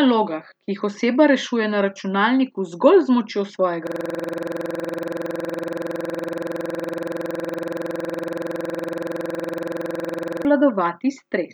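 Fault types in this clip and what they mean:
System hang loop: from 3.87 s to 10.45 s, right after "računalniku zgolj z močjo", the speech freezes into one 46.44 ms fragment repeating well over a hundred times, a rapid rattling stutter at 21.5 Hz. The computer or its audio driver stopped supplying new samples while the sound hardware kept replaying the same ring buffer, whose length fits a 2048-sample buffer, until the system recovered shortly before the clip ends.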